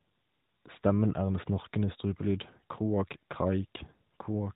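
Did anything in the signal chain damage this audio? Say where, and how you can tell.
No, nothing damaged this audio.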